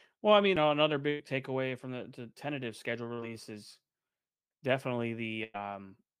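At 0.56 s, between "I mean" and "know another", a CD skip: the laser jumped to another turn of the disc's spiral, so after a very brief mute of only a few milliseconds playback resumes from a different point. It is heard as a tick and an abrupt discontinuity, unlike packet loss, which fills the gap with synthetic sound.

From 1.10 to 1.21 s, after "know another" and before "takeaway from the the", comes a burst of packet loss. About 100 ms of the stream never arrived, and the receiver stretched the last sound for roughly that long while fading it. That gives a held buzz or decaying hiss before the speech jumps ahead. The same fault recurs from 5.44 to 5.56 s, again about 100 ms concealed, with no silent gap.

From 3.13 to 3.20 s, just after "the the tentative schedule", there is a short concealed packet loss. About 40 ms went missing and was patched by extrapolating the last sound, then blended back into the real audio. 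It is heard only as a brief smear or wobble, too short to become the sustained, fading buzz of the longer bursts.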